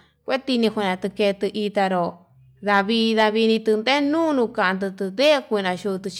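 Hard clipping occurs at 0.64 s and again from 2.73 to 2.81 s and 5.22 to 5.32 s: speech peaks overdrive a stage by about 1 dB, then about 2 dB, flattening the tops into brief harsh crackle.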